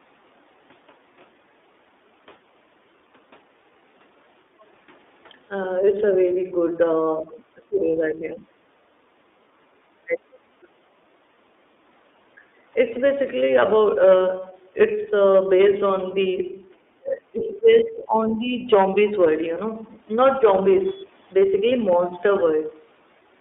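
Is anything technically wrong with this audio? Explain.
Yes. The speech carries codec damage throughout, plus several short echo-control and packet-loss faults.

The iLBC codec is plainly audible across the whole clip. Its narrowband coding, which fits a 13.33 kbps mode with 30 ms frames, limits the line band to roughly 250 Hz to 3.6 kHz. The voice sounds rough and synthetic, and a spectrogram shows nothing above 3.6 kHz.

From 4.6 to 4.64 s there is a faint scrap of the other side's voice leaking through, about 40 dB below the speech. It is likely uncancelled loudspeaker echo and appears as a tiny, faint smear on the spectrogram.

Speech is suppressed in double talk from 7.25 to 8.46 s, 10.06 to 10.7 s and 17.01 to 18.72 s. Dips reach roughly 20 to 25 dB, likely because the echo canceller attenuated everything. The waveform shows the envelope collapsing in patches.

There are lost iLBC frames at 7.91 to 7.95 s and 12.93 to 12.99 s, 30 ms each. 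The decoder repeats the last pitch cycle, which produces a brief buzzy hold. On a spectrogram this appears as a short, flat harmonic stripe before clean speech resumes.

The background is gated by the echo canceller at 8.74 to 8.86 s (about 14 dB down) and 9.61 to 9.75 s (about 12 dB down). The room sound briefly drops, and the noise floor shows short dark notches.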